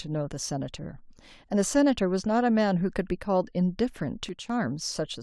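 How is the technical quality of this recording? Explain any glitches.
The recording has one glitch near the end. From 4.29 to 4.50 s there is a sudden gain jump: a digital gain change was likely applied in a single sample with no ramp. The speech and its background noise drop together by about 8 dB for roughly 0.2 s, then snap back.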